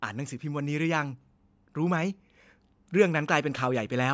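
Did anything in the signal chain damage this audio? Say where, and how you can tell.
Yes: automatic gain rising in the call processing stage lifted its gain by about 3 dB from 0.13 to 2.17 s, so speech and background swell together.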